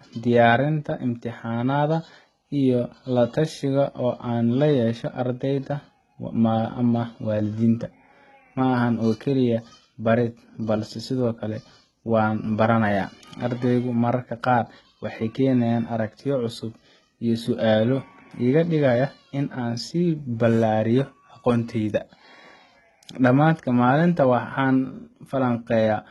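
Throughout, the speech likely went through heavy HE-AAC compression at a low bitrate, with copied-up treble making s sounds gritty and metallic, and nothing above 11.8 kHz.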